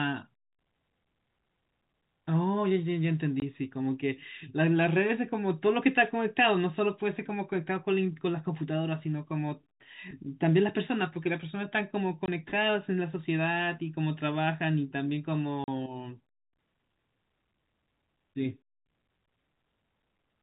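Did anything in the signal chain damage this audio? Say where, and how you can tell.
Yes. Packet loss filled with silence hits the network stage at 3.40–3.42 s, 12.26–12.28 s and 15.64–15.68 s. Each gap is a stretch of dead digital silence with abrupt edges as the speech cuts out and back in. The first two gaps last 20 ms and the third 40 ms, which points to one and then two lost 20 ms packets. The receiver did no concealment and simply played nothing for the missing audio. Through all of this the G.711 telephone coding carries the speech with its usual 4 kHz band limit.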